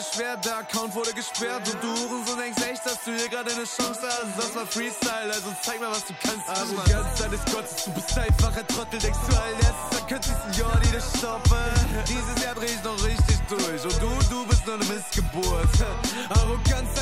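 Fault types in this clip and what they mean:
Video or display buzz: interference from a screen or video cable leaking into the audio path, its energy locked to the picture's field rate. Here it appears from 8.70 to 13.50 s as a steady 75 Hz buzz with a layer of harsh hash riding above it, sitting roughly 20 dB below the wanted sound. The 75 Hz fundamental points to a display refreshing at 75 Hz rather than mains hum, which would sit at 50 or 60 Hz.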